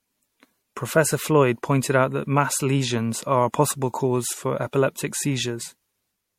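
Throughout the speech, swirly, hollow smearing blurs every attack, with nothing above 16.5 kHz. It is likely generation loss: repeated MP3 re-encoding, consistent with 64 kbit/s passes.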